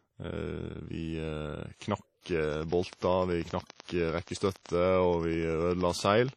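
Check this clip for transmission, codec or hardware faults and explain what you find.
Three kinds of fault are audible in this speech clip: codec damage throughout, four pre-echoes, and a long train of clicks.

WMA compression, throughout. The audio has a ringing, washy quality with hiss that rises and falls with the speech, and nothing is present above 13.1 kHz. This is likely heavy damage from a Windows Media Audio encode at a bitrate around 32 kbps. A transform codec at that rate spreads its quantisation noise across long blocks and discards weak spectral lines. The result is this smeared, band-limited sound.

Pre-echo, at 1.77 to 1.81 s, 2.68 to 2.71 s, 3.67 to 3.70 s and 4.23 to 4.27 s. Before each sharp onset comes a short burst of hiss lasting 42, 31, 33 and 47 ms respectively, and the attack itself sounds softened. When an attack lands late in a transform block, the noise sized for the loud part is spread evenly over the whole block. 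It therefore fills the quiet moment just before the attack.

Train of clicks, from 2.44 to 6.30 s. Roughly forty similar clicks tick at a regular 10.4 per second, standing out at around 10 dB above the speech and continuing through the pauses. Repeated pulses of much the same shape at a steady rate point to something injecting them into the signal. The likely source is interference from nearby equipment or a faulty connection or power supply.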